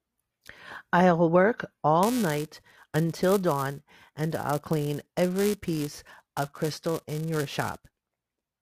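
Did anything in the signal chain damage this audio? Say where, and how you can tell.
Yes. From 2.03 s to the end of the clip, the speech carries a steady robotic buzz at 345 Hz that rides on the voice and drops away in the gaps. This is buffer tearing at the driver or buffer stage. The writing program and the hardware reader have slipped against each other, so every period contains a small sliver of audio from a few milliseconds earlier, with a hard join on each side. That repetition rate fits a 128-sample buffer.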